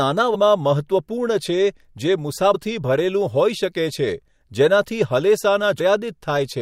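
Damaged data in a compressed stream shows up three times in the speech: from 0.34 to 0.36 s, at 2.54 s, and at 5.78 s. Each time, corrupted bytes in the coded stream leave the decoder unable to read the frames at that point. It loses its place and hunts for the next valid frame header before playback resumes. Each break is a brief chirp or blip of only a few hundredths of a second.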